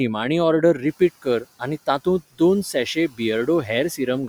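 From 1.22 to 1.61 s and again from 2.95 to 3.2 s, speech is cut by the noise suppressor. After the room noise rises around one second, quiet speech gets classed as noise and pulled down by about 14 dB, leaving brief stretches swallowed and faint.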